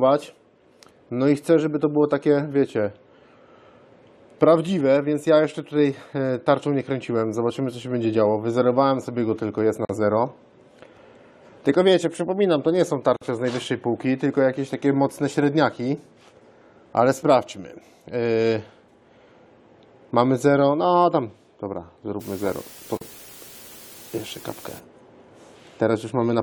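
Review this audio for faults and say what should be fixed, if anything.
A gap at a join of encoded pieces opens at 9.85 s (about 43 ms), 13.17 s (49 ms) and 22.97 s (41 ms). Each piece was encoded separately and joined untrimmed, so the encoder's start delay and end padding remain as brief silences. Unlike a dropout, the sound resumes exactly where it stopped. Trim encoder delay and padding, or encode the whole program in one pass.

Low bit depth with dither runs from 22.21 to 24.79 s. The signal there fits only 7 bits, and dither turns the rounding error into a steady, even hiss roughly 25 dB below the signal. Unlike undithered truncation, there is no grainy distortion. Keep at least 16 bits throughout processing.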